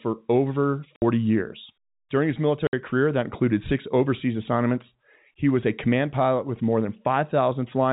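Packet loss filled with silence occurs twice: at 0.96 s and again at 2.67 s, the receiver lost a run of audio and played nothing in its place. Each gap lasts 60 ms, which fits two 30 ms packets dropped back to back. The speech cuts out abruptly, leaving short holes with hard edges, all within the 4 kHz telephone band of the G.711 coding.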